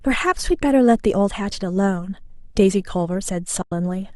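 At 3.62 s the speech falls into a soft-edged hole that lasts until 3.72 s. This is AAC frame loss with muting. The decoder zeroed the spectrum of the missing frames, and a gap of about 100 ms fits roughly ten short frames lost. The overlapping windows fade the sound out and back in rather than cutting it abruptly. On a spectrogram this shows as a blank vertical band across all frequencies. In the waveform the envelope tapers smoothly to silence and swells back.

The faint coding texture around it likely comes from low-delay AAC at light strength.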